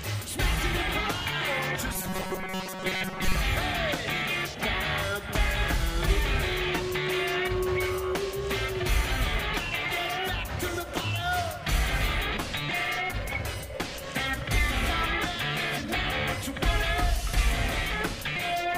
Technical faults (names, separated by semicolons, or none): robotic sound from repeated short buffers